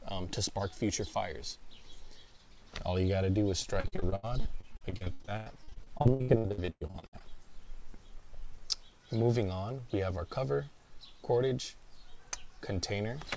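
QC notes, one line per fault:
3.62–7.22 s, repeated packet loss (robotic sound): the audio turns choppy as dozens of short holes, the longest about 110 ms, are patched by stretching the sound just before each one. About 38% of this span is concealment filler, and other pieces are simply missing.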